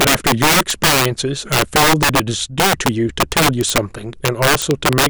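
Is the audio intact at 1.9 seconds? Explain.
No. Integer overflow runs throughout: peaks driven about 11 dB past full scale wrap to the opposite sign, producing violent cracks on loud moments.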